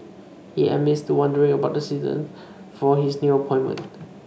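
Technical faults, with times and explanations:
Nothing technical stands out in this speech recording; there's no fault to point to anywhere in it.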